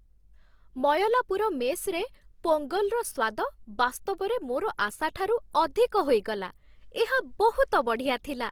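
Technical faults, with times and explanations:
Throughout: Opus compression, likely from a low-bitrate music-mode encode near 24 kbps, starved of bits, leaving the speech audibly rough and grainy, with noisy band filling, while bandwidth still reaches about 20 kHz.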